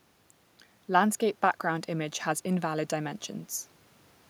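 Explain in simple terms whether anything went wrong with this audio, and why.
Nothing stood out on listening to this speech, and the faint background noise from the room where it was recorded is a normal part of the recording.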